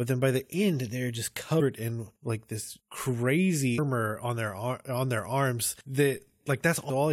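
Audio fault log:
1.59–1.61 s, 3.77 s, 6.89 s: damaged data in a compressed stream. Three quick blips, the first between "the end they're just" and "in like this", the second right before "on their". Corrupted bytes make the decoder lose sync and jump ahead to the next frame header.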